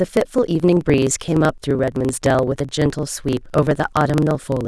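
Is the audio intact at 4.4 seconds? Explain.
No, the speech at 4.4 s is caught in a block size mismatch (truncated) running through the whole clip. Each block's tail gets chopped off on read, which fits a 1024-sample read size. You hear a 23.4 Hz buzz, and the speech runs about 1.12 times fast at roughly normal pitch.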